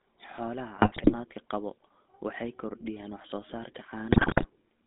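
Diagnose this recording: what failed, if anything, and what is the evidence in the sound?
The codec stage failed here: the whole speech clip carries GSM full-rate codec damage that is plainly audible. The voice has a buzzy, gravelly roughness from the regular-pulse excitation, which keeps only a thinned, decimated pulse train. The sound fits a 13 kbps GSM full-rate encode. On a spectrogram, energy sits inside a 200 Hz to 3.5 kHz band with nothing above, and the harmonics look smeared and coarse rather than cleanly striated.

A second failure sits on the network side: GSM bit errors corrupting the received frames. The first burst runs from 0.76 to 1.15 s, ending just before "qaba waxay kordhiyaan wax". The second runs from 4.12 to 4.47 s, right after "kordhiyaan wax soo saarka". Both break into squawks, pops and gargling as damaged filter, pitch and gain values reach the decoder. The spectrogram shows frame-long blocks of distorted, misplaced energy at these points.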